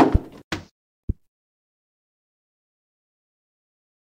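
At 1.04 s the sound drops out for about 46 ms, ending at 1.09 s: a gap at a join of encoded pieces. The audio was encoded in separate sections, about 4 s apart, and joined without trimming, so one run's padded last frame and the next run's start-up delay both remain as silence. Unlike a dropout, nothing is lost: the sound picks up exactly where it stopped, and the codec blurs the edges of the gap.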